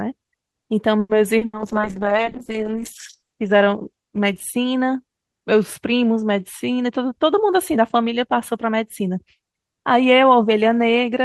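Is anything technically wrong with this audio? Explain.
Yes. This speech clip has five faults, all in how the call was delivered.

Call audio freeze, 0.99 to 1.12 s: the sound stretches into a fading buzz and then about 20 ms of silence. About 100 ms of filler is inserted, and then the speech resumes exactly where it left off, with nothing lost. Everything after this point is about 100 ms later. The likely cause is packets held up in transit, which left the jitter buffer empty, so the receiver had to extend the last sound until the packets arrived.

Short concealed packet loss, 1.37 to 1.44 s: about 40 ms of audio never reached the decoder in time. The receiver filled the gap by extending the preceding sound and then blending back into the real signal. The result is a brief smear or wobble.

Burst of packet loss, 1.45 to 1.56 s: about 80 ms of consecutive audio was lost. The receiver extended the last sound and faded it as the gap continued, so it becomes a held buzz or a dying hiss. 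Playback then resumes farther along, and those 80 ms of speech are missing.

Call bitrate drop, 1.58 to 4.83 s: the call's bandwidth estimate fell, and the encoder was told to spend far fewer bits. The sound fits a fall from around 32 kbps to around 8 kbps, lasting about 1.66 s at its lowest. Opus then codes coarsely and cuts the top end, so the bandwidth narrows from 20 kHz to 8 kHz. The speech turns rough, watery and muffled until the bitrate recovers.

Jitter buffer speed-up, 6.71 to 7.78 s: the buffer held more audio than its target, so the receiver removed many short pitch-period slices to shed about a tenth of a second of delay. The speech runs at about 109% speed with the pitch unchanged, which makes that stretch sound hurried.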